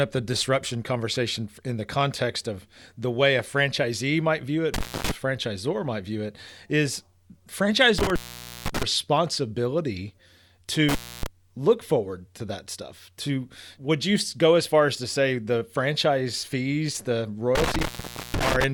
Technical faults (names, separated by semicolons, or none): intermittent contact